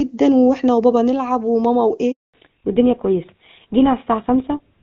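A handover gap opens at 2.12 s in this speech recording. The speech fades out within a few tens of milliseconds and stays silent for 220 ms, until 2.34 s. That silence is the call being passed from one network to another with no speech frames delivered during the switch, so whatever was said in that window is gone rather than muffled. The opening section before the gap sounds like clean HD Voice, with its AMR-WB coding showing little or no damage, which fits the highest 23.85 kbit/s mode. At 2.34 s a fallback to narrowband sets in and lasts to the end of the clip. The new link carries nothing above 4 kHz, so the crisp upper band disappears and the speech turns duller and rougher. That loss of the upper band points to the connection landing on an older GSM full-rate codec at 13 kbit/s instead of the wideband one.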